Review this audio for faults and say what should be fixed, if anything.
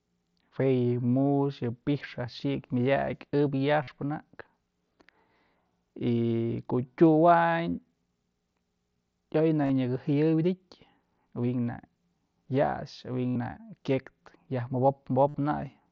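Concealed Bluetooth headset packet loss occurs at 3.83 to 3.88 s, 9.62 to 9.70 s, 13.30 to 13.36 s and 15.28 to 15.34 s, the last just after "kyek yaj". At each point, lost headset packets were filled by repeating the best-matching recent stretch of waveform. Each gap totals 45 to 68 ms, and the 9.62 s loss is scattered across 75 ms in shorter runs. The filled gaps sound like a buzzy held tone with a small warble where real audio resumes, unlike the silent gap of an unconcealed dropout. Keeping the headset close to the phone and away from 2.4 GHz interference would prevent these losses.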